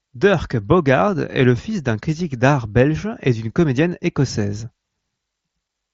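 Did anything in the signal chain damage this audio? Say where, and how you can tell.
No, nothing in the chain stood out on listening, with the speech arriving through the wideband Bluetooth mSBC headset codec as expected, its audio band topping out around 8 kHz.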